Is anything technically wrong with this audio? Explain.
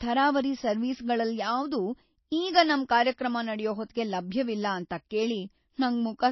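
Yes. Throughout the speech there is plainly audible damage, likely from MP3 compression at a bitrate near 24 kbps. Starved of bits, the encoder removes everything above 5.8 kHz and drops quiet detail frame by frame. The result is dulled s sounds and a watery, swirly texture. On a spectrogram this appears as a hard ceiling at 5.8 kHz with blinking, patchy islands below it.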